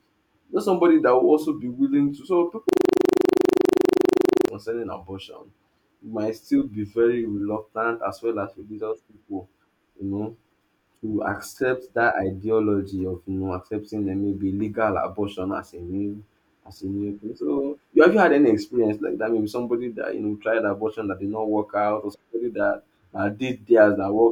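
From 2.69 to 4.48 s the speech freezes into a rapid, mechanical rattle: one 40 ms fragment repeats 45 times, producing a rough buzz-like stutter at 25 Hz. This is a system hang loop. The computer or its audio driver stopped supplying new samples, while the sound hardware kept replaying the same stale stretch of its ring buffer. Because that buffer held only 40 ms, the exact repeats fuse into a pulsing tone at the loop rate.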